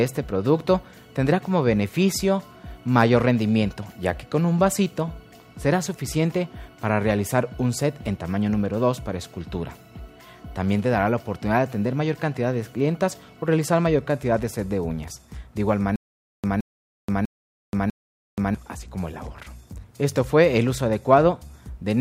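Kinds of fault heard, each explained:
Stutter with silent gaps: from 15.96 to 18.55 s the same short burst of about 168 ms plays four times, each followed by about 479 ms of dead digital silence, so it returns at a steady 647 ms pace. The likely cause is a stalled player or stream that replays its last buffered fragment at each retry and then runs empty. Whatever audio belonged in that stretch never plays.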